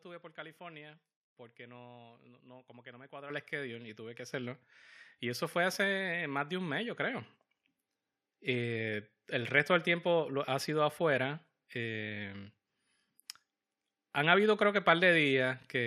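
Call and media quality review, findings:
Microphone volume stepped up, 3.3 s and 4.32 s. Speech and background jump together in two steps mid-sentence: about 10 dB right after "que no me cuadra", just before "el schedule y tuve", then about 6 dB more after "schedule y tuve que". Probable component: call software's automatic mic gain control. It judged the input too quiet and raised the device input volume in single steps instead of ramping, so the whole signal rises at once.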